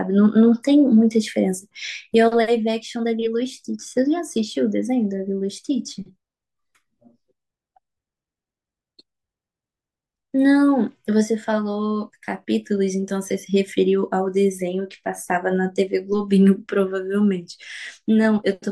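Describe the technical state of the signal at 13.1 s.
At 13.08–13.1 s, chunks out of order: one 10 ms chunk was delivered a chunk late and plays after the chunk meant to follow it. Nothing is missing, but the swapped order leaves three hard joins, heard as a brief jumbled stutter.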